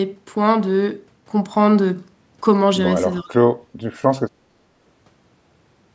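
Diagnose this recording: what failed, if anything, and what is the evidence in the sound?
From 3.21 to 3.42 s the talker drops by about 25 dB for roughly a fifth of a second, at the call processing stage. That's likely speech suppressed in double talk: with both ends talking, the echo canceller couldn't separate near-end speech from loudspeaker echo and pushed everything down.

There's also background gated by the echo canceller, at 3.67 to 3.79 s and again at 4.38 to 4.49 s. The room sound dips about 14 dB, then about 8 dB, each time for around a tenth of a second. The canceller clamped the mic while the far end played, then let go.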